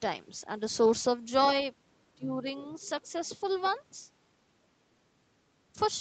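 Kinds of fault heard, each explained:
Speech suppressed in double talk: From 2.15 to 2.46 s the speech sinks by roughly 20 dB for about 300 ms, likely because the echo canceller, facing both ends talking at once, could not tell the talker from the loudspeaker echo and pulled everything down. On a waveform the envelope pinches to a thin band over that stretch. On a spectrogram the harmonics fade before recovering.
Other side's voice leaking through: Between 2.58 and 2.99 s a faint second voice sits under the main speech at about 30 dB below it. It is likely residual loudspeaker echo that the canceller failed to strip from the microphone signal, so the far end's talk slips back through. A waveform barely shows it. A spectrogram shows weak, separate harmonic traces that don't follow the main talker's pitch, low in energy, all within the band below 8 kHz set by the Opus call path.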